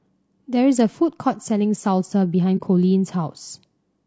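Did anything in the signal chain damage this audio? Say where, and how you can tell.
Yes. The speech sounds rough and grainy all the way through, with a hiss-like fill between the harmonics and a top band that sounds thin and somewhat synthetic. That points to the codec stage, most likely low-delay AAC compression of the AAC-ELD kind used for video calls. Its short frames resolve pitch harmonics poorly and spend bits quickly, and damage this plainly audible fits a rate around 32 kbps.

At 2.57 to 2.62 s the sound fades out and back in, leaving a brief soft-edged gap. This is AAC frame loss with muting, probably from network or transport loss, and the length fits a single missing frame of about 30 ms. The decoder replaced the lost spectrum with silence, and its overlapping windows smoothed the edges of the hole into gentle ramps rather than a hard cut.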